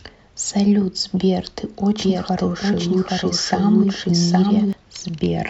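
A doubled audio track runs from 2.01 s to 4.73 s in this speech clip: a second, full-band copy of the speech plays roughly 0.7 s behind the original at about the same level, with no decay or room colour, and it cuts in and out abruptly. The likely cause is the same signal being captured twice, once through a slower path, or an edit leaving two copies overlapped out of step.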